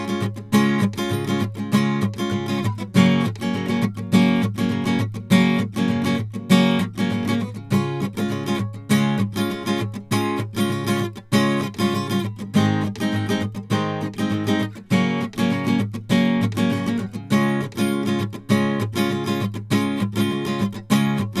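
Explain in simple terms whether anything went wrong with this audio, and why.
Nothing went wrong with this music recording that a listener can pick out. The music carries on steadily, with no moment where the sound suddenly breaks, jumps or changes in a way it shouldn't.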